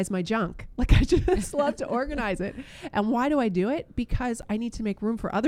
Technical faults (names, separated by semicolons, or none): block of digital silence